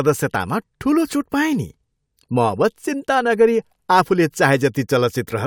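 No technical faults occur anywhere in the recording, so there is nothing to describe in time order.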